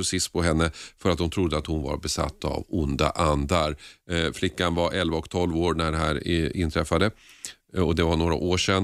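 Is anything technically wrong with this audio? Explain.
No, nothing technically wrong stood out on listening to this speech recording.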